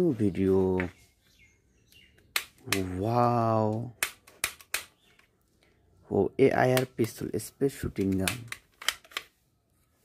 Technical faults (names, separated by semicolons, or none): none